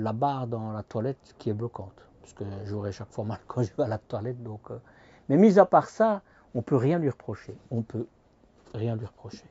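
No technical faults can be heard anywhere in the audio.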